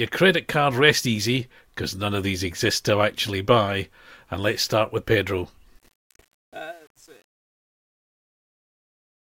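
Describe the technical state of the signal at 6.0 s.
At 6.0 s the speech is entering a fade-out that begins around 5.79 s and ends at 9.24 s. Truncation distortion on the fade is present from 5.79 s onward. The gain stage drops the low bits without dither, and the coarse steps fit roughly 9-bit resolution. As the level sinks, the waveform turns into blocky square steps. From 6.05 s to 9.24 s the tail sounds gritty.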